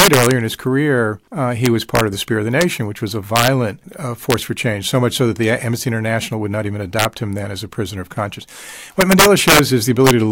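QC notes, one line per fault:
0.00–0.31 s, 1.66–2.01 s, 2.61 s, 3.36–3.48 s, 4.31–4.34 s, 6.99–7.05 s, 9.01–9.59 s, 10.07–10.11 s: integer overflow. Speech peaks driven up to about 5 dB past full scale wrap to the opposite sign instead of limiting, producing harsh cracks far sharper than clipping.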